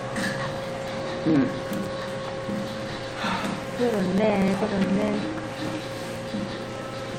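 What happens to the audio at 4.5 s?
At 4.5 s the audio is in the middle of periodic USB or driver dropouts that run from about 0.10 s to 7.12 s. Every 0.06 s something stalls the USB bus or audio driver, and a few milliseconds of audio are skipped and the ends butted together. This is heard as a steady ticking, about 17 per second, whenever there is signal. On a spectrogram this shows as evenly spaced thin vertical broadband lines. The waveform shows abrupt splice discontinuities at the same spacing.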